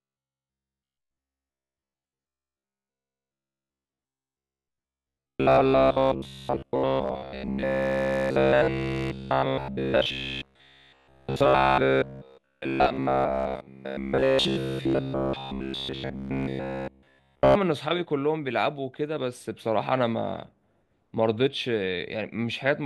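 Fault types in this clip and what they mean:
Robotic sound from repeated short buffers: from 0.02 to 17.55 s the speech becomes a stiff metallic buzz pinned near 66.7 Hz, most likely from a roughly 15 ms stretch of audio being replayed over and over while fresh audio is skipped, which is what happens throughout that span.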